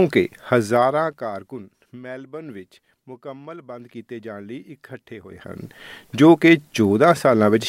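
Zipper noise runs from 0.64 to 1.66 s: the level falls by roughly 20 dB in unsmoothed 1 dB steps, about twenty per second, each leaving a small click.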